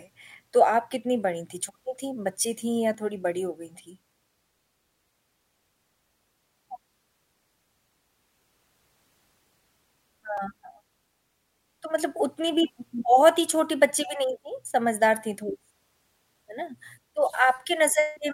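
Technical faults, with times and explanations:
2.94 s and 10.37 s, block of digital silence: the speech drops to silence for about 2 ms, then about 4 ms, and snaps back with no fade. At that length you hear each as a quick tick rather than a gap, likely from a buffer not filled in time.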